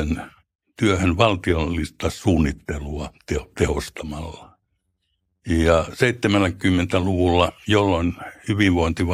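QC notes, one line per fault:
No technical faults detected.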